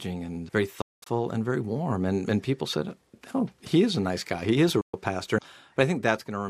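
The sound cuts out twice: from 0.81 to 1.07 s, where about 224 ms goes missing in broken pieces, the longest gap being about 203 ms, and again from 4.81 to 4.94 s for about 122 ms. Each time it resumes further along, as though it kept playing through the silence. This is likely a Bluetooth dropout, where audio packets miss their deadline at the headphones and are discarded, leaving holes in the output.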